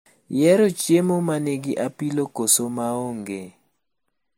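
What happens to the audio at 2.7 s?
At 2.7 s the speech carries two layers of codec smear over a hard ceiling near 16.5 kHz, likely from transcoding between lossy codecs, probably a low-rate MP3 re-encoded as Vorbis, running throughout.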